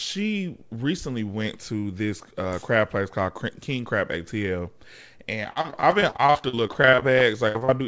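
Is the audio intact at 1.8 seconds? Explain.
Yes, the audio is intact at 1.8 seconds, with the speech carried cleanly through the WebRTC call path, whose codec leaves nothing above 8 kHz.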